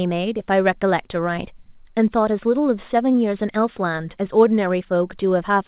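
Short concealed packet loss occurs at 3.12 to 3.16 s in this speech recording. Roughly 20 ms of audio never arrived at the decoder in time, and the receiver covered the gap by extending the preceding sound, voiced portions from their pitch and unvoiced ones as shaped noise, for about 16 ms before crossfading back into the real signal. It is heard as a brief smear or wobble. The band ends at 4 kHz, consistent with a G.711 A-law call path.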